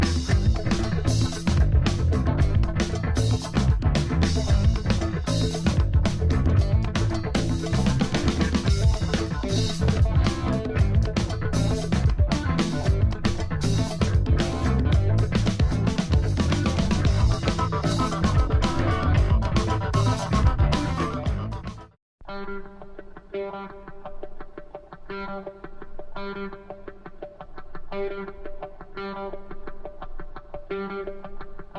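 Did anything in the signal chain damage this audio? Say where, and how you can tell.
No, nothing in the signal chain damaged this audio.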